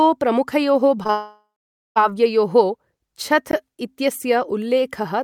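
It's a short speech recording, and things start going wrong around 1.03 s. Two short concealed packet losses, back to back at 1.03 and 1.07 s, each patch over about 20 ms of missing audio with a quick smeared continuation. Straight after that, from 1.11 to 1.98 s, there's a long network dropout as the likely cause. The filled-in sound fades out, leaving roughly half a second of silence before the speech resumes with a chunk gone. At 3.51 s there's a block of digital silence about 18 ms long, a hard cut out and back in with no fade.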